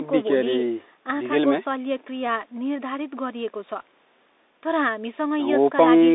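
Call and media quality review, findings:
Bluetooth CVSD headset codec, throughout: speech confined to about 250 Hz–3.7 kHz, granular hiss underneath, scratchy sibilants, plainly audible codec distortion. One-bit up/down delta modulation, consistent with 64 kbit/s; the adaptive step lags loud high content and distorts it.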